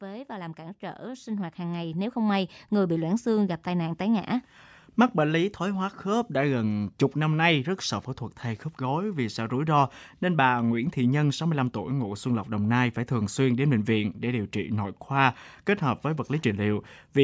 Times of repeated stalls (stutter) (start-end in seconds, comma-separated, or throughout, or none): none